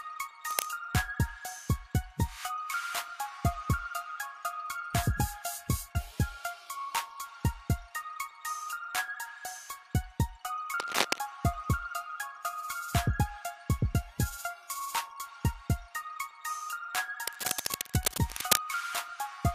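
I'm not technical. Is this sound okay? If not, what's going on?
No. Cable scratch noise appears three times: from 0.51 to 0.66 seconds, from 10.80 to 11.18 seconds, and from 17.27 to 18.57 seconds, the last and longest burst. Each time, a rough scratching or rustling sits on top of the sound, about as loud as the sound itself. This is likely a worn cable, plug or knob being moved: its electrical contact keeps flickering between good and bad, and those rapid changes come through as crackly noise.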